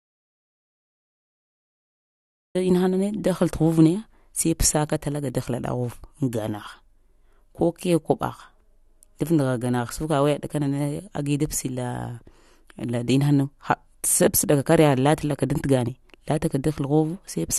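An audio dropout to silence runs from the very start until about 2.55 s: the recording opens in dead digital silence, with no room tone, then the speech cuts in mid-flow. The input was likely lost while the recorder kept writing zeros, so that opening stretch is gone.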